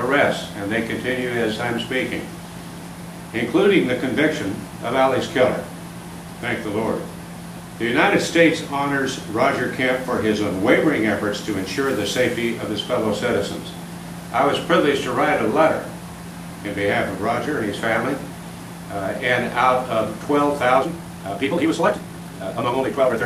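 From 20.76 s to the end at 23.26 s the audio suddenly runs faster, at about 1.75 times its earlier pace, sounding rushed while its pitch stays where it was. That combination marks a time-stretched section: software likely squeezed this final stretch to fit a shorter length, holding the pitch steady by dropping short slices of the waveform, and those missing slices are what make it sound hurried.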